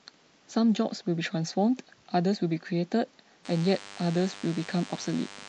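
From the start, the speech has a watery, swirly edge with dulled treble, which likely comes from MP3 compression, and the plainly audible damage fits a low bitrate around 64 kbps. At 3.45 s a DECT cordless phone buzz comes in and runs to the end: a thin, steady 100 Hz buzz from rectified radio bursts, sitting roughly 20 dB under the speech.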